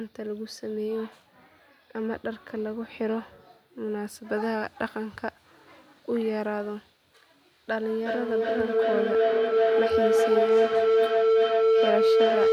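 A feedback howl starts at 7.97 s and runs to the end of the clip. Sound from a loudspeaker is reaching a microphone on the same call and coming back louder on each pass, so the repeats build rather than die away. The loop settles on a tone around 500 Hz, with repeats coming roughly every 0.4 s, and peaks about 7 dB above the speech level.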